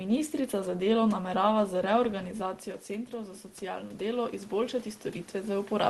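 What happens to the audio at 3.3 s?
Right after "delo namerava z reorganizacijo", from about 3.1 s to the end, you're hearing automatic gain rising. The input level fell by about 9 dB, so the gain control slowly turns itself back up, and the voice and room noise swell together.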